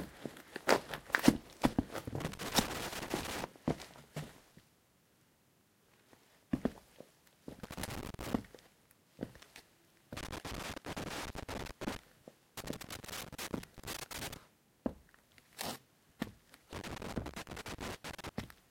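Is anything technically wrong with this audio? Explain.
Yes. Loose connector crackle occurs at 2.20–3.44 s, 7.63–8.33 s, 10.17–11.97 s, 12.57–14.37 s and 16.73–18.29 s. A shifting contact intermittently breaks the signal, producing irregular scratchy bursts. These appear as ragged waveform dropouts with spikes and as broadband vertical streaks on a spectrogram.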